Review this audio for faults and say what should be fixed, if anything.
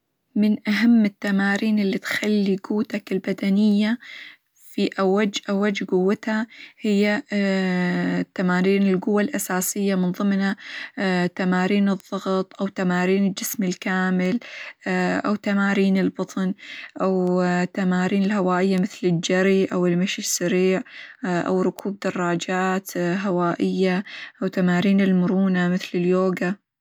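Word clock ticks run through the speech from 0.70 to 26.31 s. There are about forty sharp, uneven ticks, roughly every 0.7 s. The receiving device is not locked to the sender's clock. At each slip a single sample is dropped or repeated, suggesting a mismatch of roughly 30 ppm. Lock the receiver to the incoming digital clock or a shared word clock.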